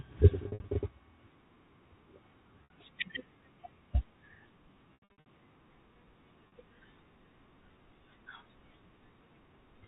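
Packet loss with pitch repetition hits four times: 0.48 to 0.68 s, 2.64 to 2.70 s, 4.94 to 5.25 s and 6.48 to 6.52 s. At each gap the receiver loops the last pitch cycle, so the short ones at 2.64 and 6.48 s come across as a brief buzzy hold. The first and third are patchier stretches of several dropouts, which fits 20 ms packets. The narrowband G.711 telephone sound stays steady throughout.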